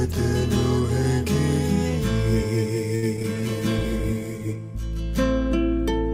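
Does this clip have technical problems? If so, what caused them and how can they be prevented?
Yes. From 2.95 to 3.26 s, repeated packet loss (robotic sound) causes four gaps, the longest 71 ms, each patched by extending the previous sound. About a third of that stretch is concealed, giving a choppy texture. A jitter buffer sized for the network's delay variation, plus forward error correction, would reduce this.

From 3.37 to 4.65 s, a call bitrate drop from 64 to 13 kbps forces coarser coding with reduced high-frequency content, so the sound turns rough and muffled for about 1.2 s. More stable bandwidth and a higher minimum bitrate on the encoder would prevent it.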